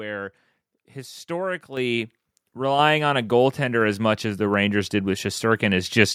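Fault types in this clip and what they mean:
microphone volume stepped up: the speech and its background noise jump louder together in two sudden steps, about 6 dB at 1.77 s and about 4 dB more at 2.79 s, as the call software judged the microphone too quiet and raised its input volume.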